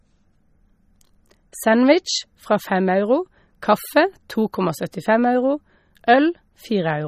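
Throughout the clip, MP3 compression at a low bitrate, likely around 32 kbps, is starving the encoder of bits, so it cuts everything above 15.1 kHz and drops weak frequency lines frame by frame, leaving the speech plainly watery and swirly, with smeared consonant onsets.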